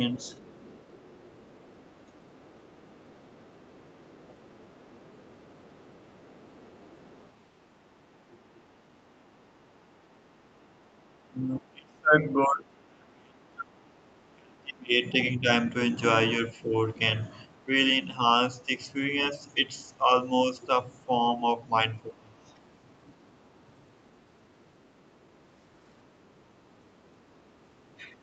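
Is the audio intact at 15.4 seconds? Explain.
No. Speech suppressed in double talk runs from 11.17 to 22.49 s. The talker dips by up to about 30 dB, likely from the echo canceller ducking both voices, which shows as gouged, thinned waveform stretches. The other side's voice leaks through from 15.26 to 15.43 s as a faint scrap about 35 dB below the speech, likely residual loudspeaker echo, visible as a weak, separate smear on the spectrogram.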